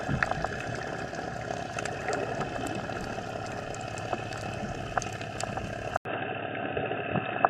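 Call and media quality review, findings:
Band collapse at 5.97 s after an 80 ms dropout. Spectrogram shows nothing above 3.8 kHz to the end. Likely an input switched to a poorer device, such as a headset call profile. Level unchanged.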